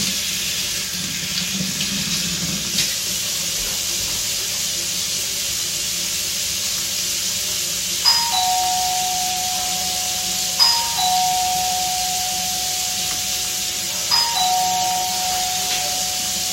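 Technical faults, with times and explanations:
Nothing technical jumps out here; the sounds come through without any glitches worth flagging.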